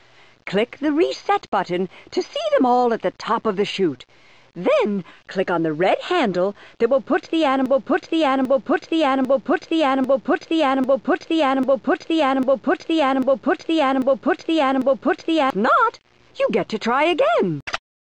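From 7.66 s to 15.50 s the audio falls into a broken-record loop: a fragment about 0.80 s long plays ten times in a row, identical each time, and whatever should have been heard across those eight seconds never arrives. The likely cause is a player, encoder or stream that stalled and kept resending the last piece it held. On a waveform or spectrogram the same 0.80 s block appears side by side, repeating like a stamped pattern.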